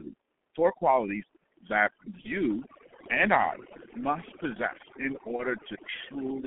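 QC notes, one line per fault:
Throughout, overdone noise removal: the background drops and breaks up into twinkling specks. A noise reducer set far too strong is switching off individual frequency bands near its noise estimate, taking the quieter parts of the voice with them.
Throughout, G.723.1 codec: the speech is muffled and hoarse, consonants are smeared, and nothing comes through below about 250 Hz or above about 3.4 kHz. This is heavy damage from a low-rate telephony codec, around 6.3 kbit/s, working in coarse 30 ms frames with a slowly updating voice model.
2.21–2.28 s and 5.36–5.43 s, VoIP packet loss concealed by the speech codec: each time, the voice is briefly stretched into a buzzy tone or coloured noise that fades, then stays weak or rough for a moment after. One 30 ms frame went missing, and the decoder filled the gap by extending its last pitch and filter at falling gain.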